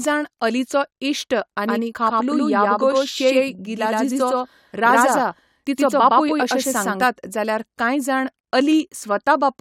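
From 1.68 to 7.06 s the speech is doubled by an equally loud, dry copy trailing about a tenth of a second behind, likely a doubled audio track from a second capture path.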